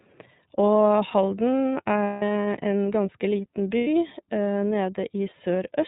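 iLBC codec throughout this speech: the band stops at 4 kHz and each frame is coded on its own, leaving plainly audible roughness, which fits the 13.33 kbps, 30 ms mode. Lost iLBC frames at 2.05–2.22 s (180 ms) and 3.78–3.87 s (90 ms), which fits six and three dropped frames, are bridged by a repeated, noise-mixed pitch cycle heard as a held buzzy vowel.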